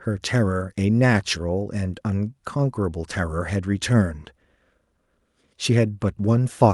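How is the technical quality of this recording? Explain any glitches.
No glitches can be heard in this speech recording. It has come through a WebRTC call path, and the high end stops at 12 kHz, which fits the Opus codec running at 64 kbps.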